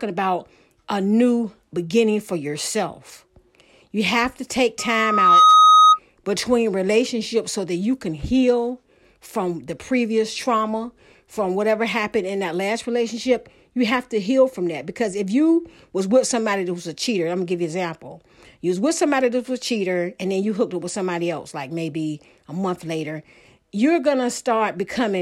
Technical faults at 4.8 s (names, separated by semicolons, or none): loudspeaker feedback squeal